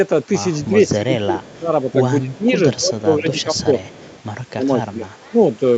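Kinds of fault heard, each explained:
Speech suppressed in double talk: The speech level repeatedly sinks, likely because an echo canceller heard both sides talking at once, could not separate the near talker from loudspeaker echo, and turned everything down. Dips fall at 0.66–0.72, 0.97–1.71, 2.22–2.56, 2.78–3.75, 4.52–5.12 and 5.31–5.40 s. The shallowest is around 10 dB, and the deepest is roughly 25 dB in the long stretch near 1.0–1.7 s.
Echo leak: A faint delayed copy of the speech trails the original by 244 ms. The longer episode runs from 3.83 to 4.23 s at about 30 dB below the speech, and a short scrap at 5.17–5.30 s sits about 40 dB down. This points to a loudspeaker end whose echo canceller left part of its microphone pickup in place, so that residue was sent back into the call.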